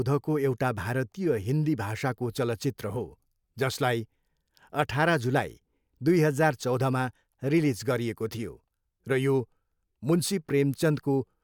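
No technical faults are audible.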